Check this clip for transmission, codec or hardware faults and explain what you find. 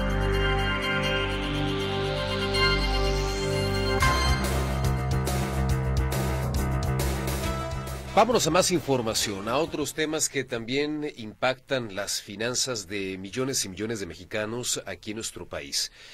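Checking this clip turns up no faults to explain.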